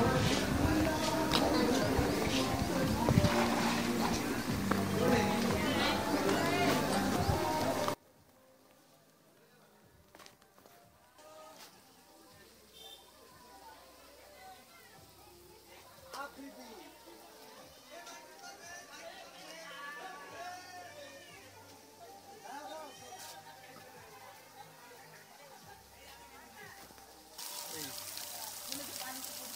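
From 7.94 s to the end, the sound collapses by about 28 dB to a faint residue, likely one channel inverted, cancelling shared content when summed to mono.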